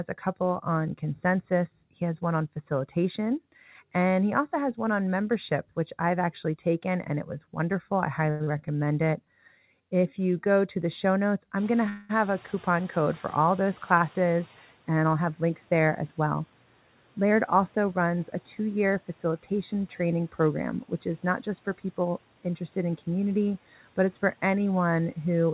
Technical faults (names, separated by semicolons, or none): channel delay (comb filtering); short stall from a late packet; skip ahead; jitter buffer slow-down; noise suppressor catching up; call audio freeze; jitter buffer speed-up